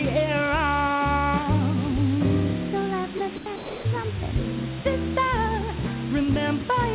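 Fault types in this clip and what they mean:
Low bit depth with dither: The signal is stored with very few levels, which fits a 4-bit signal, and dither is added before rounding. This turns the rounding error into a constant, even hiss, loud at only about 10 dB below the sound, with no distortion.
Sound dropped by the voice detector: Most likely, the sender's detector judged parts of the sound to be background and stopped sending, and comfort noise was played instead. The sound gives way to steady noise at 3.18 to 3.20 s, 3.36 to 3.46 s and 3.56 to 3.84 s.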